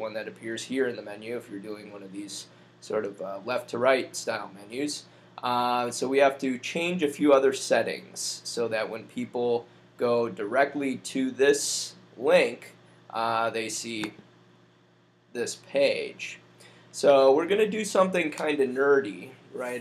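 Nothing here calls for comment; there's no technical fault to point to anywhere in the recording.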